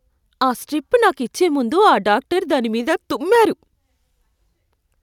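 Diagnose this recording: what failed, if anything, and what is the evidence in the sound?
Nothing failed; no faults detected.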